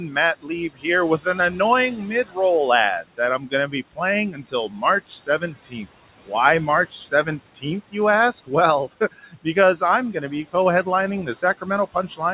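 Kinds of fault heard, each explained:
noise suppressor artifacts: The suppressor keeps pulling down every band it judges to be steady noise, by about 17 dB, frame by frame, so the room background sinks in the gaps and swells under the speech.
speech cut by the noise suppressor: The suppressor mistakes parts of the speech itself for noise and lowers them with the background, by up to about 18 dB. Between 0.08 and 2.37 s roughly 0.7 s sounds swallowed, and from 3.02 s onward soft sounds keep fading.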